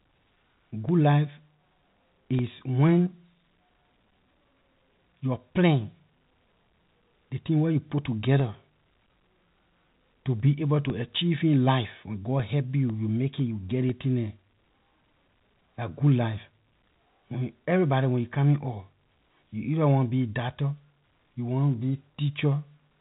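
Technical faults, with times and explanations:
0.39 to 15.89 s, periodic USB or driver dropouts: roughly 1 ms silent gaps every 0.5 s, about 30 in all, ticking in strict rhythm only where speech sounds, unlike random glitches.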